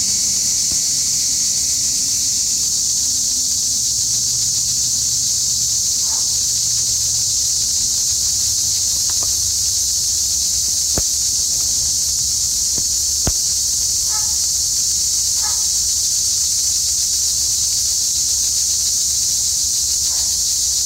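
Hard clipping runs through the whole clip. The signal overdrives a stage by about 10 dB, flattening roughly one sample in twenty and adding harsh fuzz to loud peaks.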